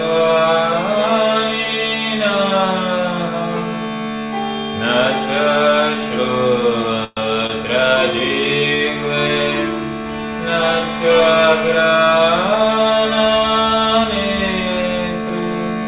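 At 7.04 s there's a call audio freeze lasting to about 7.20 s. The last sound drags on as a fading buzz or hiss, with a brief silence before playback resumes where it left off, likely because packets stalled and the jitter buffer ran dry. Then at 7.47 s comes a short stall from a late packet, running to 7.52 s: a sound is held about 27 ms too long with a slight buzz or dip, then continues without loss. Everything stays inside a 4 kHz ceiling, which fits a narrowband call codec like G.711.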